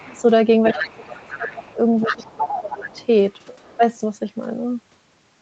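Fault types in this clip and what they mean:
Other side's voice leaking through: a second, fainter voice sits beneath the talker. It is barely audible at the start and near 3.6 s, and much stronger from 0.66 to 3.07 s, likely uncancelled loudspeaker echo. A spectrogram shows an extra set of harmonic bands overlapping the talker's.
Speech suppressed in double talk: the talker's level drops sharply, likely while both voices overlap, by roughly 25 dB at worst. This happens from 0.74 to 1.64 s and from 2.07 to 2.86 s, with briefer dips at the very start and near 3.8 s. The waveform envelope shows abrupt notches, and the speech bands turn much fainter.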